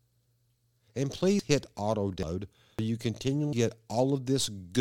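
Samples were likely overwritten before being read, a dropped buffer (overrun), so the speech jumps ahead at 1.39 s just before "hit auto", 2.23 s after "hit auto", 2.79 s and 3.53 s, each losing about a tenth to a third of a second.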